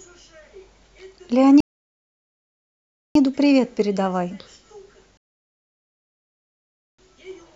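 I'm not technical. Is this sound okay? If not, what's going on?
No. A rebuffering stall at 1.60–3.15 s and again at 5.17–6.99 s: the player ran out of downloaded speech, paused silently, then resumed exactly where it stopped.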